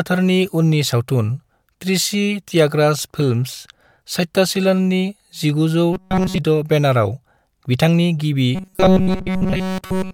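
Audio likely arrived too slowly, so playback kept looping a buffer of about 5.3 ms. From 5.93 to 6.38 s, and again from 8.55 s to the end, this robotic sound from repeated short buffers replaces the speech with a rigid, metallic 188 Hz buzz.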